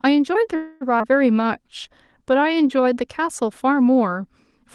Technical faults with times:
0.55-0.83 call audio freeze
0.99-1.02 skip ahead
1.32-2.82 jitter buffer slow-down

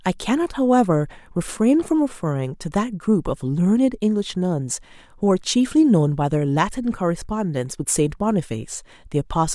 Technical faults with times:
none

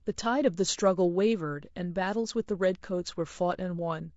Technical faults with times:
0.00-4.17 low-delay AAC compression

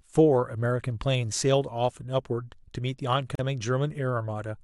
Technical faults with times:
3.35-3.39 gap at a join of encoded pieces

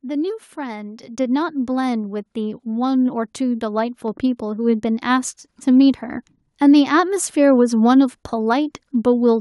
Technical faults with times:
1.02 microphone volume stepped up
2.04 microphone volume stepped up
3.06 microphone volume stepped up
4.08 microphone volume stepped up
5.10 microphone volume stepped up

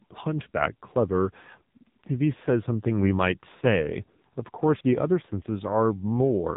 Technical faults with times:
0.00-6.56 AMR narrowband mobile codec
4.81 audio missing between chunks

